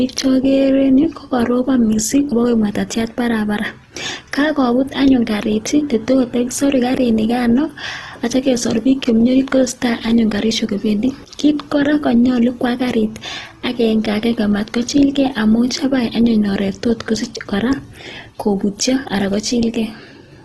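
Across the whole speech clip, the sound is rough and grainy, with tones turned noisy rather than swirling, and nothing above 12.1 kHz. The cause is likely Opus compression in its music mode at a low rate, one that fits 16 kbps, filling starved bands with noise-like energy.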